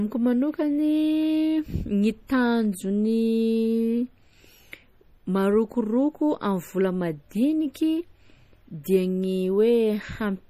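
A speech recording with a watery, swirling quality running through it from start to finish. The sibilants go metallic and nothing comes through above 15.2 kHz. That is plainly audible MP3 compression, likely from encoding at a low bitrate, which fits something around 40 kbps. Starved of bits, the encoder cuts the treble at a fixed point and drops quieter frequency lines, which flicker in and out from frame to frame. At 8.84 s a sharp onset is preceded by a short hiss about 16 ms long, and the attack itself sounds softened. That is pre-echo. The codec spreads its quantisation noise across a whole block, so noise sized for the loud attack also fills the quiet instant just before it.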